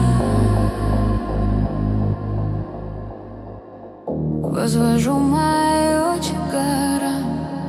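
No technical faults can be heard anywhere in this clip. There is nothing at any point in the audio that calls for a timestamp or an explanation.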